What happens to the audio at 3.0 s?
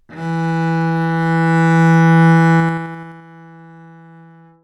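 At 3.0 s the sound is partway through a burst of zipper noise running from 2.56 to 3.24 s. The level drops in unsmoothed 3 dB steps, around ten per second, for a fall of roughly 25 dB, and each step leaves a small click, heard as a ticking zip over the fade.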